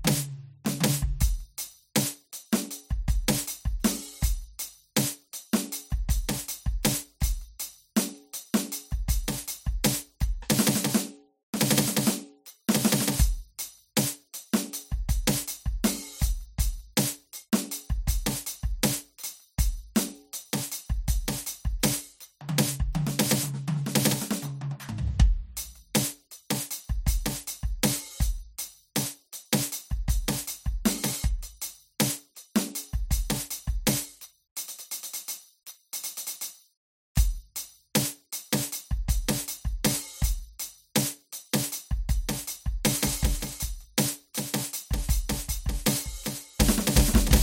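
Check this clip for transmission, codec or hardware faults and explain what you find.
One fault stands out in this music clip, a doubled audio track that appears abruptly at 42.91 s and runs to the end. From that point, a second full-band copy of the music trails the original by roughly 400 ms, sitting around 10 dB lower, with no decay or room colour, so it sounds like a dry, distinct slapback rather than reverb. The likely cause is the signal being captured twice, once through a slower path, or an edit leaving two misaligned copies layered together.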